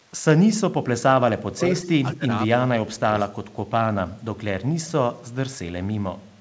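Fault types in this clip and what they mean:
Speech suppressed in double talk: The talker's level collapses while the far side is also active, most likely because the echo canceller could not tell the near voice from loudspeaker echo and attenuated both. It happens three times: 0.57 to 1.61 s, with the deepest drop around 35 dB across roughly a second, then 2.15 to 2.26 s and 2.64 to 3.15 s, each dipping around 25 dB, the last for a little under half a second.
Echo leak: A faint delayed copy of the speech comes back at 1.8 to 1.9 s and again at 3.19 to 3.28 s, trailing the original by 198 ms. It likely comes from a loudspeaker endpoint whose echo canceller let part of its microphone pickup through. The first scrap sits about 15 dB below the speech. The second is about 30 dB down.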